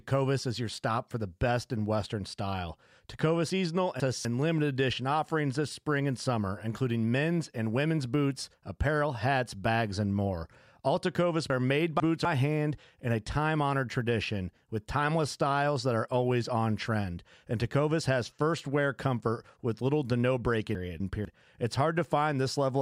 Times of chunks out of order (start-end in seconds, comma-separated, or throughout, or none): 3.50-4.25, 11.50-12.25, 20.75-21.25